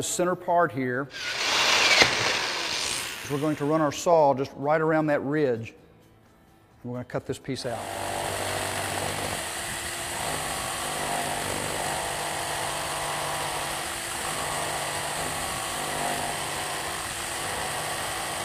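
No technical faults are audible.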